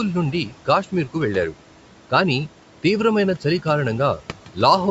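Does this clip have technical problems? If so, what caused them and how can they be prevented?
Yes, three things stand out.

Noise suppressor artifacts run through the whole clip. The suppressor pulls the room noise down by about 12 dB between phrases and lets it back up under the speech, so the leftover noise pumps. Preventing it means a quieter room or gentler suppression settings.

Speech cut by the noise suppressor happens between 0.32 and 0.68 s. In short bits adding up to about a tenth of a second, the suppressor mistook quiet speech for noise and dipped it by up to about 9 dB, so those sounds come across faint and swallowed. Less aggressive suppression, or a better speech-to-noise ratio at the mic, avoids this.

Sample clock jitter starts at 2.97 s, right after "వెళ్ళారు కాని", and continues to the end. The converter's clock wobbles by roughly a microsecond, so samples land slightly off time. 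That adds a fine hiss or roughness, around 45 dB below the signal, which is strongest on loud, bright sounds. A stable clock source or a better audio interface fixes this.

For context, the room noise sits about 19 dB under the speech, and the call's mic processing limits the audio to 8 kHz.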